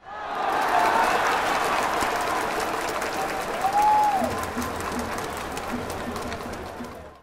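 Everyday sound recording; no technical faults can be heard.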